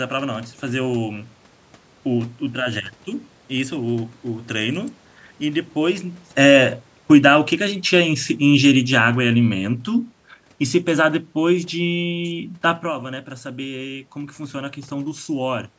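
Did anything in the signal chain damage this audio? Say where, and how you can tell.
Yes. The call processing's automatic gain falling is at fault. The automatic gain control judged the input too loud, or its background noise too strong, and pulled its gain down gradually between 5.76 and 9.73 s, by about 6 dB in all. The sound starts loud, then sinks steadily over those four seconds. The tell is that the room background drops in step with the speech. A talker moving back around 6 s would quieten only the speech, never the room noise beneath it.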